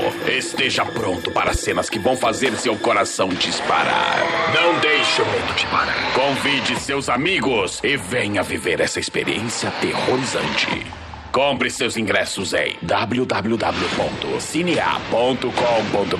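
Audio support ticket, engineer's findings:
Loud pop, 1.48 to 1.58 s. Likely a sudden voltage step or pulse entering the signal path, from a plug, switch, static discharge or driver glitch. Downstream circuitry shapes the transient. Two pops in quick succession, about 10 dB above the programme level, laid on top of the sound, which continues underneath. Check connectors, switching and driver.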